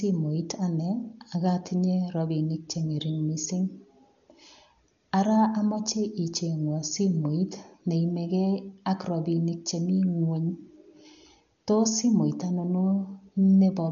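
From start to finish the speech sounds dull, with rough, fluttering noise around voiced tones. This is likely Dolby Digital compression at a rate near 48 kbps, with bands starved of mantissa bits refilled by dither noise. A spectrogram shows nothing above 7 kHz and grainy speckle between harmonics.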